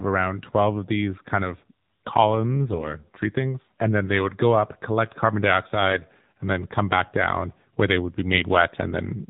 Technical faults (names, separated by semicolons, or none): AMR narrowband mobile codec; AMR bit errors